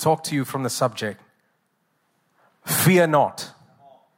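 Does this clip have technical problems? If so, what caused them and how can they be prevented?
Yes. Sharp single clicks occur at 0.32 s and 1.12 s. They are likely dropped samples. A fraction of a millisecond is missing, so the waveform jumps abruptly. Larger buffers and stable clocking keep the stream from skipping samples.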